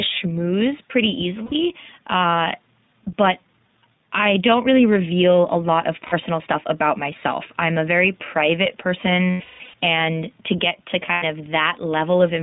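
Gain pumping runs through the whole clip: the level swells and ducks by around 5 dB under loud passages, which shows as a waveform envelope that pumps. The likely cause is input gain set too high, feeding a fast limiter.

The iLBC codec at 15.2 kbps also runs throughout. The band spans roughly 150 Hz to 3.7 kHz, so the spectrogram is empty above 3.7 kHz. Speech sounds plainly rough and synthetic.

Lost iLBC frames come next, in time order:
1.46 to 1.54 s: 60 ms, which fits three 20 ms frames.
6.06 to 6.14 s: 60 ms, between "reveal a lot of" and "stuff about myself I'm".
9.30 to 9.74 s: after "I'm a very private" and before "and to get to". About 360 ms is lost, scattered over 440 ms, with the longest run around 200 ms.
11.06 to 11.25 s: after "and to get to". About 120 ms is lost, scattered over 160 ms, with the longest run around 100 ms.

In each gap the decoder repeats the last pitch cycle mixed with noise, so it sounds like a held, buzzy vowel. 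On the spectrogram it appears as flat, smeared harmonics. Speech recovers almost at once afterward.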